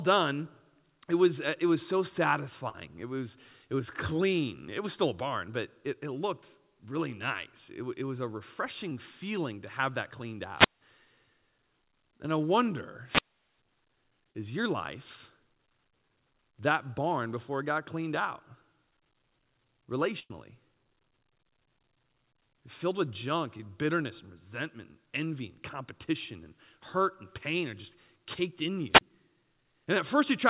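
At 2.69 to 2.75 s comes a burst of packet loss. About 50 ms of audio never arrived, and the receiver continued the last sound and faded it down. On a spectrogram it shows as a smeared, decaying continuation before the signal jumps ahead.

At 8.90 s a short concealed packet loss fills a 10 ms hole with synthesized continuation. It is heard as a tiny smear, and the waveform shows a slight seam.

At 10.56 to 10.81 s a wireless microphone squelch dropout occurs. The FM signal fades, hiss rises, then the receiver mutes for about 170 ms. The waveform shows a flat gap after a broadband noise rise.

At 13.04 to 13.59 s a longer squelch dropout mutes for about 400 ms.

At 14.31 to 14.35 s, 37 ms is concealed, heard as a brief wobble.

At 20.19 to 20.32 s a second burst of packet loss leaves about 100 ms of fading concealment, and then 30 ms of near silence.

At 23.58 to 23.60 s another 12 ms concealment gives a smear.

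At 28.93 to 29.01 s a final squelch dropout briefly mutes the sound for about 30 ms.

Throughout, the call path leaves no energy above 4 kHz, which fits a narrowband G.711-type codec.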